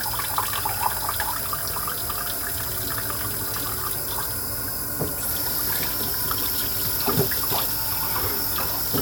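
Nothing goes wrong technically in this one; the sound just runs along without any hiccups worth pointing out.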